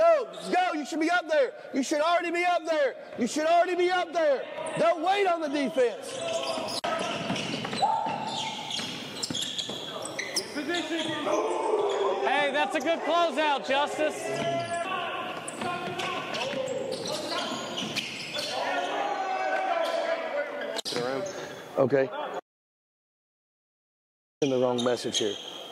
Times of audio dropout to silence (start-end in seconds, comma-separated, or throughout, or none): 22.40-24.42